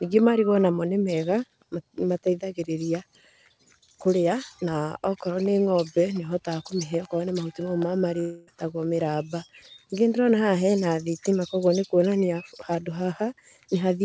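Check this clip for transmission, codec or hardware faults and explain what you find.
One transmission fault is audible in this speech, which is carried on a path band-limited at 8 kHz, consistent with G.722. From 8.20 to 8.49 s there is a long network dropout, likely: about 0.28 s never arrives, the receiver stretches the last sound into a fading buzz or hiss, and speech resumes without the lost portion.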